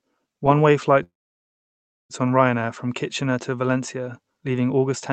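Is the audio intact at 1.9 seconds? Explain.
No. At 1.9 s the speech sits inside a call audio freeze running from 1.03 to 2.12 s, likely caused by packets stalling in transit until the jitter buffer emptied. The receiver stretches the last sound into a brief fading buzz or hiss, then about 1 s of silence. Unlike a dropout, nothing is lost: the speech picks up exactly where it stopped, just about 1.06 s later, still carrying the call codec's 8 kHz bandwidth.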